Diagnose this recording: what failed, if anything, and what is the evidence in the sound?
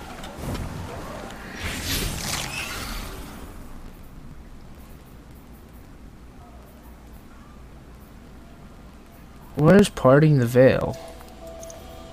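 The failure is at the driver or buffer stage: periodic USB or driver dropouts. From 0.61 s to 11.83 s, a tick sounds every 1.02 s, about ten in all, each where a couple of milliseconds of audio was skipped rather than filled with silence. A background task stalls the USB bus or audio driver on a fixed schedule. The strict regularity separates this from network packet loss or random interference clicks, which land at uneven times.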